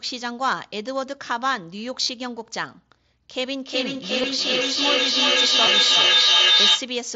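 It's a speech recording that came through a Bluetooth headset link, audibly band-limited to about 8 kHz the way mSBC audio is, and it has two distinct problems. The first is concealed Bluetooth headset packet loss. Around 2.03 to 2.09 s, most of a 60 ms stretch goes missing, with the longest gap near 37.5 ms. The receiver papers over it by looping the last bit of good waveform, so you hear a brief buzzy, steady tone and then a small warble as real audio resumes. There are two shorter hits, one at 4.22 s that fits a couple of lost packets and a single-packet one at 5.67 s that is almost hidden. The second is feedback echo between two devices, running from 3.36 to 6.98 s. Two devices in the same room are on the call, and one plays back what the other's mic sent. That mic picks it up again, and neither echo canceller removes the other device's output. Each bit of speech comes back roughly every 400 ms, getting thinner and more ringy on each pass. 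The loop is hot enough that the repeats stack up instead of fading, peaking at about 9 dB above the speech itself.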